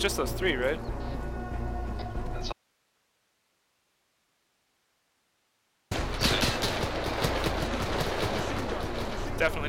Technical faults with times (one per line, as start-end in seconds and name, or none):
2.53-5.91 audio dropout to a faint residue
7.86-9.69 doubled audio track